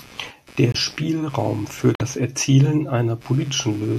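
A speech recording with two distinct technical faults. Throughout the clip runs computer activity noise: a buzzy, pulsing interference repeating at roughly 150 times a second and sitting about 25 dB below the speech. It rises and falls with the computer's processing load rather than with the talker, because that load current shifts the ground the audio circuitry shares with the processor, graphics card and peripherals, and the disturbance rides into the signal path. The second fault is corrupt frame muted. The audio drops abruptly to silence from 0.72 to 0.76 s, a gap of about 42 ms, and again from 1.95 to 2.02 s, about 70 ms. The decoder rejected compressed frames whose bits had been damaged, and the player filled their slots with silence. The gap lengths fit whole frame multiples, a couple of frames in the first hole and a few in the second, and playback timing stays intact afterwards.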